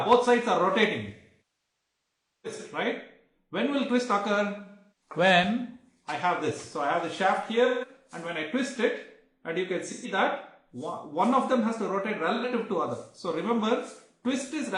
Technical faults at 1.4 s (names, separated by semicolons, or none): AAC frame loss with concealment